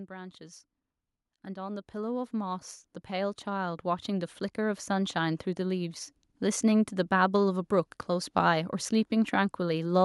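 Speech with automatic gain rising between 1.29 and 5.95 s: the gain control judged the input too quiet and lifted its level by about 13 dB over nearly five seconds. The background swells along with the voice, which marks it as gain rather than the talker moving closer.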